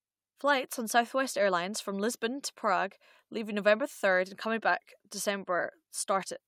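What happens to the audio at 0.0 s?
Nothing goes wrong at 0.0 s; the speech begins intact, with no dropout, click or distortion at that moment.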